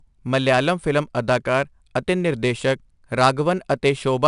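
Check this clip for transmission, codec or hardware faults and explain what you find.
One codec fault runs through the whole clip: 4-bit ADPCM compression, plainly audible from start to finish. Each sample is coded as a coarse 4-bit step away from a predicted value, so the quantisation error rides along with the speech as a gritty hiss that swells on louder syllables and smears sharp onsets. Nothing survives above 10.6 kHz, which fits a stream of about 89 kbps at a reduced sample rate. On a spectrogram, expect a broadband noise haze tracking each loud passage and a hard ceiling at 10.6 kHz. The waveform shows ragged, stepped attacks.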